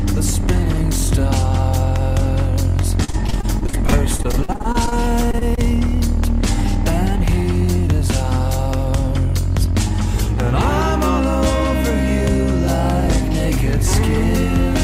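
From 3.04 to 4.93 s the audio breaks into choppy fragments: repeated packet loss, producing the familiar robotic sound. About twenty separate holes fall within that stretch, the longest around 51 ms, and roughly a quarter of the span is synthesized by the receiver extending whatever it last decoded. Because the gaps arrive so close together, each patch is followed soon after by the next hole. That is why it sounds choppy rather than like a series of separate glitches, and it differs from steady codec smearing in that pieces are actually missing. Shortly afterwards come three isolated cases of short concealed packet loss, at 5.31 to 5.35 s, 5.39 to 5.43 s and 5.55 to 5.59 s. In each, about 20 ms failed to arrive in time and was bridged by continuing the preceding sound before blending back into the real signal. They register as brief smears or wobbles. What separates them from the robotic stretch is spacing: each hole is short and stands alone, with intact audio around it, so there is no sustained metallic quality, only momentary blurs where a short transient can drop out.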